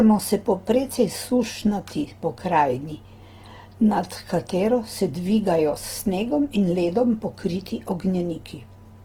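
Speech with a grainy, rough, noisy texture throughout. This is likely Opus compression in music mode, filling starved bands with noise, which fits roughly 16 kbps.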